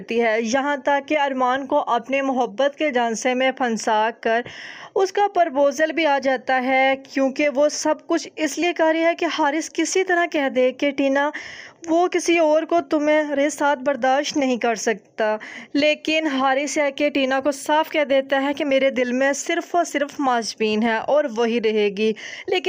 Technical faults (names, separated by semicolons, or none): none